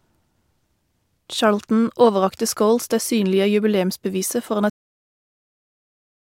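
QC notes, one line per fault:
4.70–6.32 s, cut-off end: the speech stops abruptly at 4.70 s, partway through a sound, and the remaining 1.6 s is flat digital silence. There is no tail or decay, and no fade into it, just an instant drop to nothing. That sudden edge means the final stretch of audio was never written out or played back, so the recording ends mid-sound and the trailing samples hold only silence where the rest of the speech should be.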